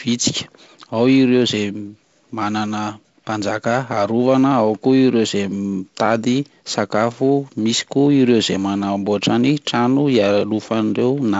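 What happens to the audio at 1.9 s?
Nothing goes wrong at 1.9 s: the speech carries on intact through the G.722 wideband telephone coding, with its usual upper limit of about 7.7 kHz.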